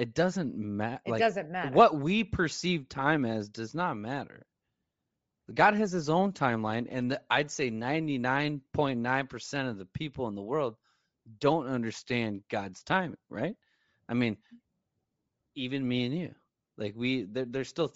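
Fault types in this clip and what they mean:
Bluetooth LC3 compression: Throughout the speech, the upper frequencies take on a plainly audible breathy, grainy texture, where high-band detail has been discarded and replaced with filled-in noise. This is likely LC3 transform coding, and it fits a 32 kbps stream with 7.5 ms frames.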